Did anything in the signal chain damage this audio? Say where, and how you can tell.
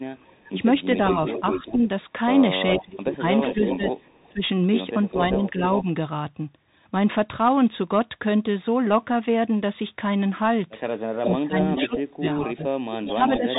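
Yes. At the codec stage, a Bluetooth CVSD headset codec runs throughout: nothing above 3.8 kHz passes, and its one-bit adaptive steps leave granular hiss and scratchy s sounds.

In call processing, there is an echo leak, likely from an unfinished echo canceller, at 0.27–1.77, 2.75–5.84, 11.22–12.0 and 13.08–13.59 s: a copy about 0.4 s late, about 5–10 dB down.

Also in call processing, there is speech suppressed in double talk, likely the canceller ducking its own talker along with the echo, at 0.49–1.81, 2.72–5.87 and 11.29–13.59 s: the voice dips by roughly 15–25 dB in pieces.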